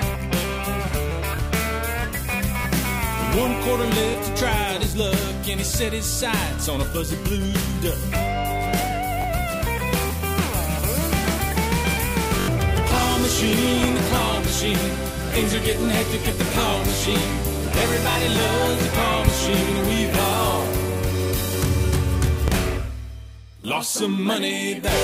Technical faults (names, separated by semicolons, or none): repeated buffer; loud pop